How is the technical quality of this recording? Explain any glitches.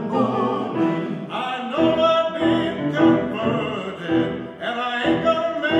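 No glitches or faults heard.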